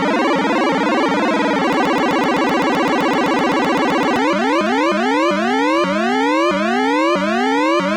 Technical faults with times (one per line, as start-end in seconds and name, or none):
1.73-4.16 broken-record loop